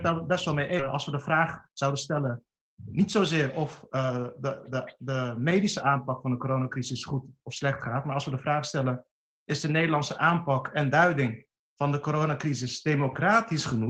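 At 0.79 to 0.81 s the audio jumps abruptly forward with no gap, losing about 0.7 s of material. This skip ahead happens when a stretch is dropped while later audio is already queued. From 0.93 to 4.27 s the sound runs about 6% fast at unchanged pitch and feels slightly hurried. This is a jitter buffer speed-up: the receiver trims short pitch-period slices again and again, cutting roughly 0.2 s in total, to shrink an overfull buffer.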